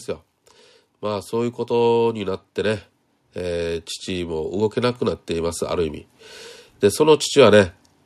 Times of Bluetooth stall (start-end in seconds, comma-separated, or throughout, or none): none